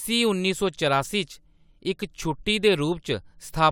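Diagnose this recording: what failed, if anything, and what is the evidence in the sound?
Nothing in the chain has failed: the speech signal arrives continuous and intact at every stage from capture to playback, with nothing in the sound pointing to a fault.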